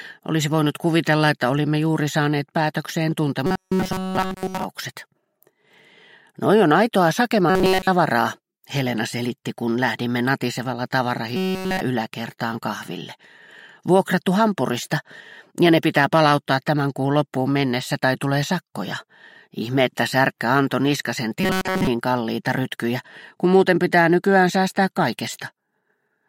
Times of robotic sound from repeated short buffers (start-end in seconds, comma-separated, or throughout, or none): 3.46-4.64, 7.50-7.88, 11.36-11.81, 21.40-21.87